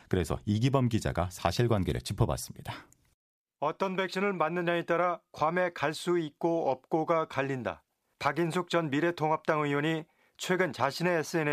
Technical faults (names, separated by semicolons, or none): none